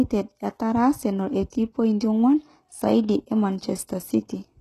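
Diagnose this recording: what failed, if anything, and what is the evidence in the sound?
The codec stage failed. The speech shows the hallmarks of HE-AAC compression at a very low bitrate, likely around 16 kbps. Only the lower spectrum is truly coded. The treble is synthesised by copying lower bands upward under a coarse envelope, and nothing survives above 12.3 kHz. The result is plainly audible throughout: sibilants turn gritty and lispy, and the top end doesn't match the harmonics beneath it.

The same codec stage also produces pre-echo at about 1.50 s. A short hiss, roughly 23 ms long, runs up to 1.52 s and precedes a sharp onset, which arrives softened and smeared. The attack fell late in a transform block. The quantisation noise, sized for the loud part, was spread evenly across the whole block, so it also filled the quiet stretch just before the attack.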